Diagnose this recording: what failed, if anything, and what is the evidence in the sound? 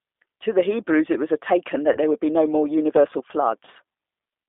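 The codec stage is at fault: the speech has been carried through a G.729 codec, the 8 kbit/s CELP scheme used for VoIP, and its damage is plainly audible. The encoder keeps only a vocal-tract filter, a pitch predictor and a sparse set of pulses for each short frame, so the voice sounds rough and faintly synthetic throughout. The band sits between roughly 300 Hz and 3.6 kHz, with nothing above.

On the network side, there are two spots of VoIP packet loss concealed by the speech codec, at 1.93 to 1.98 s and 3.65 to 3.69 s. Each fits a single lost 20 ms packet. At these points the decoder had no data, so it stretched its last pitch and filter settings into a brief buzzy tone or fading coloured noise. Because each frame builds on the previous one, the voice stays weak and smeared for a few tens of milliseconds after real audio resumes.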